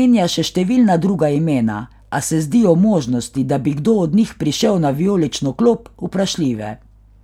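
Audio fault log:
Nothing in the recording stood out as a problem on listening.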